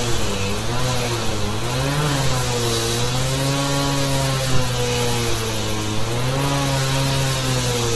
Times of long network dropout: none

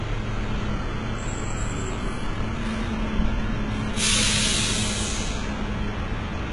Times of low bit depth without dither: none

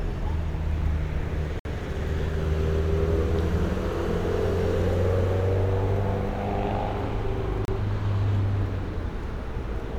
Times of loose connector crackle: none

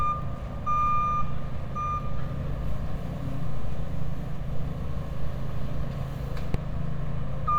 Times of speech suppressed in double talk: none

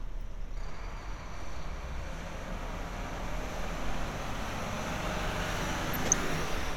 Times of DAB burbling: 5.93-6.13

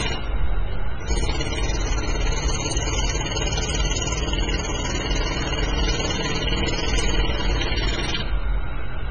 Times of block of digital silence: none

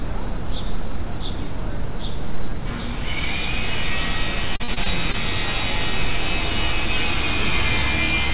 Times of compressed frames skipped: none

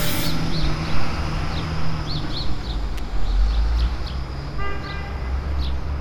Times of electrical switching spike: 2.98

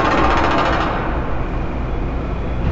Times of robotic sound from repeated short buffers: none

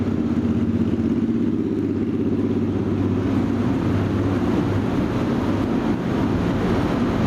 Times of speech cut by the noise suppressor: none

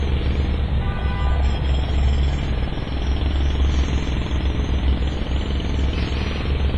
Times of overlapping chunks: none

